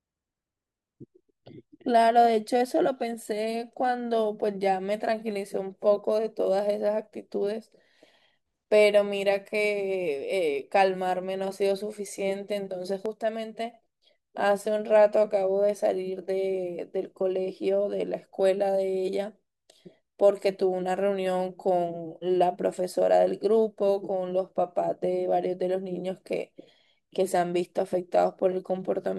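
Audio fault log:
13.06–13.74 s, one channel drops out: the speech falls abruptly by about 6 dB, then recovers. Likely cause: one stereo channel lost before the mono sum.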